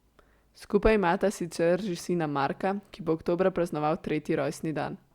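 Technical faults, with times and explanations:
No technical faults are heard in this speech clip.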